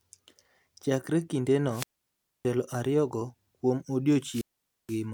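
At 1.69 s the speech suffers a wireless microphone squelch dropout lasting until 2.45 s. The FM link weakens, hiss swells, and the receiver's squelch gates the output to near silence for about 0.62 s. A second dropout runs from 4.20 to 5.04 s, muting for about 0.48 s. On a spectrogram each shows a brief broadband noise smear, then an empty vertical band, while the waveform flattens to almost nothing before the speech resumes.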